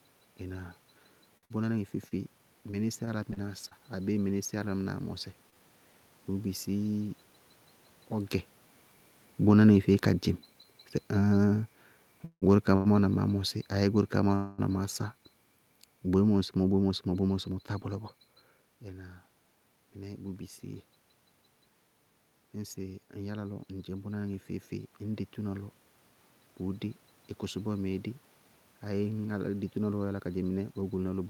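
Speech, running about 31 s, with several network and level faults. From 1.37 to 5.56 s there are scattered short gaps: around ten small holes, none longer than about 50 ms, each bridged by extending the preceding sound. The result is brief ticks and smears over a few percent of that stretch, with about 160 ms of audio actually lost. Automatic gain falling runs from 9.35 to 14.80 s. The level control judged the input too hot and pulled the gain down by about 6 dB, so voice and background sink together. Inside that span, from 10.40 to 11.25 s, a jitter buffer slow-down stretches the audio to 96% speed by repeating pitch periods, adding 44 ms. The voice drags at unchanged pitch. Overlapping it, from 10.63 to 12.87 s, repeated stalls (stutter) appear: three times the buffer ran dry and the last sound was held, totalling 273 ms and the longest 169 ms, so the speech hiccups but nothing is missing. 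At 14.35 to 14.60 s the sound freezes into a 232 ms held buzz or hiss before resuming where it stopped, with no content lost. This is likely a call audio freeze from packets held up in transit, which added that much delay. A jitter buffer speed-up from 16.68 to 18.73 s trims roughly 200 ms, running at 111% speed so the talk sounds hurried at the same pitch. The buffer was shedding surplus delay. Automatic gain rising from 22.56 to 27.70 s lifts the level by about 4 dB as the control compensates for a quiet input, and speech and room noise swell together. A second jitter buffer speed-up from 30.13 to 31.28 s cuts roughly 150 ms at 114% speed, rushing the final phrase. The level shifts near 8 s and 18.5 s come from the talker moving relative to the microphone. The steady background is room noise.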